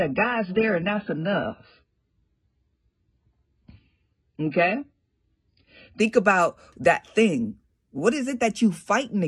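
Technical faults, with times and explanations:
0.0–6.0 s, adaptive stream starting at a low bitrate: the speech opens with nothing above 5 kHz and stronger codec artefacts, which points to a very low-bitrate AAC version, around 12 kbit/s, chosen so playback could start before the connection was measured. At 6.0 s, just before "about that thing what", the treble returns at once with no gap, fitting a step up to about 96 kbit/s. A congestion downshift would instead degrade sound mid-clip.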